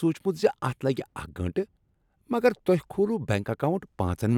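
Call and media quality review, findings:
Nothing to flag on this one; the speech comes across without any audible technical problems.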